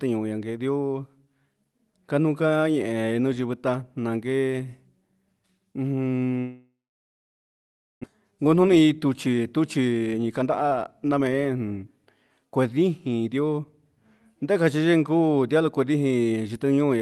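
Speech passing through a call codec, with its content stopping near 12 kHz on a spectrogram, which fits Opus at around 32 kbps. From 6.39 s to 8.05 s there is a long network dropout, likely caused by packets failing to arrive. The receiver stretches the last sound into a fading buzz for a short while, and about 1.29 s of that stretch is silence. About 1 s of speech is lost outright. On a waveform this looks like a decaying tail and then a flat line. On a spectrogram, smeared harmonics fade into an empty band. From 8.31 s to 11.63 s a jitter buffer speed-up follows. The backlog built during the outage, roughly 0.7 s of added delay, is worked off by repeatedly cutting out pitch-period-sized pieces. The speech plays at about 118% speed with unchanged pitch and sounds hurried. Harmonic spacing stays the same on a spectrogram while syllables and gaps are visibly compressed in time.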